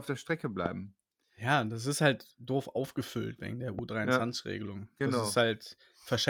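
A stray voltage pulse, likely from a switch, plug contact or static discharge, twice gets added on top of the speech signal, producing a loud pop each time. The first lands at 0.66 to 0.68 s and peaks at about 15 dB above the surrounding speech, a sharp single thump. The second, at 3.79 to 3.81 s, is softer at about 10 dB above the signal. Both times the speech carries on underneath without a break.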